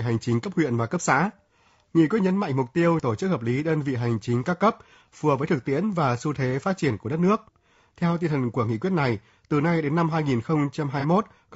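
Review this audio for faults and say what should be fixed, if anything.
Throughout the speech, the tone is rough and grainy, with noise filling the gaps between harmonics and a thin, synthetic-sounding top band. This is likely low-delay AAC compression (AAC-ELD), whose short frames resolve pitch harmonics poorly, and the damage fits a bitrate around 32 kbps. A spectrogram would show smeared, poorly separated harmonic lines and a patchy upper band. Raising the bitrate, or using a longer-frame codec where latency allows, would prevent this.

From 11.00 to 11.05 s there is a brief smeared, noisy patch. This is AAC frame loss with concealment: about 30 ms of audio, consistent with one lost frame, was replaced by the decoder from the last good spectrum. The waveform would show a short stretch of disturbed, noise-like texture, and a spectrogram would show blurred harmonics there. Adding redundancy or forward error correction on the transport would prevent this.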